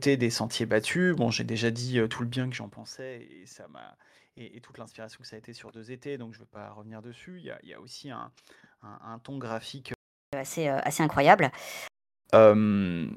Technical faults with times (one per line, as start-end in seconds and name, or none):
9.94-10.33 playback stall
10.33-11.88 catch-up at higher speed